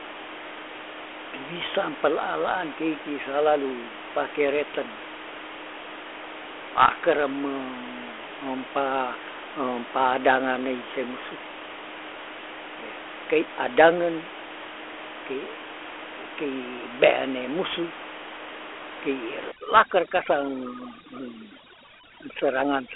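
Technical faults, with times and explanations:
Throughout: Dialogic VOX ADPCM. The speech carries a gritty hiss that rides on every syllable, the sound of coarse 4-bit adaptive steps that track the signal only roughly, which fits a 32 kbps stream. The telephone band keeps roughly 300 Hz to 3.4 kHz, and nothing survives above 3.8 kHz, so sibilants are dull and boxy. On a spectrogram the energy stops at a hard ceiling near 3.8 kHz, with a grainy noise floor that rises and falls with the voice.
19.52 to 22.96 s: overdone noise removal. For the final stretch the room noise, which sits about 13 dB below the speech elsewhere, drops to near silence with scattered twinkling specks. The reducer cuts individual frequency bands whenever they fall close to its noise estimate, and it takes quiet parts of the speech with them. A spectrogram shows a dark, speckled background with isolated bright dots and ragged gaps carved into the harmonics.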